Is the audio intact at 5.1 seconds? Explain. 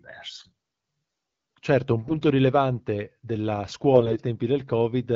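Yes, the audio is intact at 5.1 seconds, with no fault at that moment.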